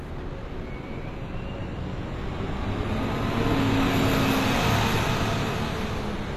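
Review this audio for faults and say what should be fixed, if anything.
The treble right through the clip has a gritty, metallic sheen, and nothing reaches above 14.9 kHz. It sounds like likely HE-AAC compression at a low rate, around 24 kbps: the top end is rebuilt from copied lower bands, so its detail doesn't match the original. To prevent it, export from the source at a higher bitrate, or use plain AAC or lossless.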